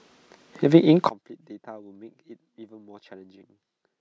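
From 1.09 s to the end, the speech collapses by about 28 dB on mono summing, the likely cause being one channel inverted, cancelling the centred content.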